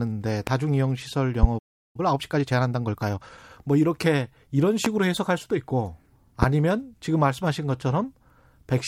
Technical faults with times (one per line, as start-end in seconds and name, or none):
0.47-0.50 loud pop
1.43-1.46 loud pop
1.58-1.96 playback stall
1.96-3.40 time-compressed catch-up
4.85-4.88 loud pop
6.43-6.46 loud pop